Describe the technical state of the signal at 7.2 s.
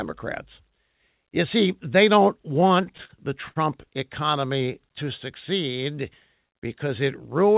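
At 7.2 s, clock slip clicks are present, running from 0.22 s to the end. Faint regular ticks recur roughly every 0.15 s. They are likely single-sample slips from unsynchronised clocks about 150 ppm apart. The band stops near 4 kHz, as the G.711 call path allows.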